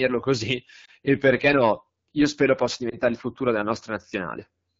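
Throughout, the speech has passed through the AMR wideband (HD Voice) codec at a low rate, which fits the 8.85 kbit/s mode. At that rate the pulse-excited vocal tract model has too few bits to follow the voice closely, so the sound takes on a plainly audible rough, raspy grain. Above 6.4 kHz the codec substitutes shaped noise for the real detail, giving the top end a hissy, synthetic sheen.

From 0.85 to 0.90 s, and again from 2.89 to 2.97 s, a single 20 ms AMR speech frame was lost when it failed its checksum. The decoder covered each gap by repeating the last good pitch and vocal tract settings at reduced gain. Because only one frame went missing each time, the result is a short dip or warble rather than a fade to silence. The sound recovers quickly, briefly weaker or rougher before it settles.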